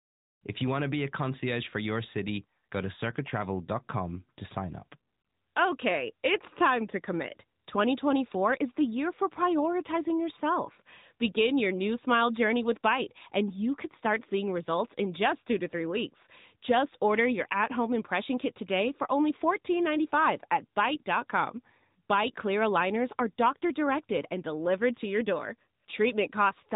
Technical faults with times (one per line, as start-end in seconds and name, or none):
0.00-26.75 AMR narrowband mobile codec